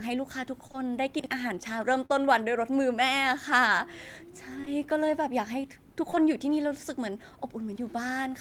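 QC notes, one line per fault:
0.67–0.76 s, short concealed packet loss: two consecutive 20 ms gaps were filled by extending the preceding sound, from its pitch where voiced and as shaped noise where not, then cross-faded back. It is heard as a soft smear or wobble, not a click, and nothing is heard repeating out of place.
1.20–1.26 s, chunks out of order: a chunk of about 21 ms plays two chunks late, after audio that should follow it. No sound is missing, but the sequence jumps, and the three hard joins give a jumbled instant. That jumble is what sets it apart from the smoother concealed losses.
2.06–2.11 s, short concealed packet loss: a single 40 ms gap, the longest here, was patched from the prior sound, giving a smear where a brief consonant can drop out.
4.61–4.68 s, short concealed packet loss: two back-to-back 20 ms gaps were bridged by extrapolation, heard as a brief wobble.
6.10–6.18 s, short concealed packet loss: two adjacent 20 ms gaps were concealed the same way, giving a short smear rather than a hard edge.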